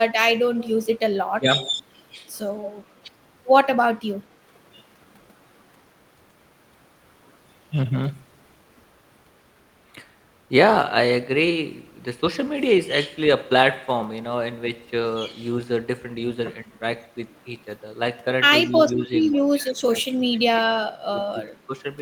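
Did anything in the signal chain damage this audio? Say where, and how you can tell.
Yes, at the call-processing stage. From 0.58 to 0.68 s a faint copy of the speech trails the original by 157 ms, sitting roughly 20 dB down. This is likely an echo leak, where a loudspeaker-side echo canceller let part of its microphone pickup return.

The speech also ducks at 1.22–1.5, 16.64–16.71, 18.67–19.12, 19.33–21.11 and 21.31–21.73 s, by anywhere from a few dB to about 35 dB. This points to speech suppressed in double talk, likely because the canceller attenuated everything while both sides spoke at once.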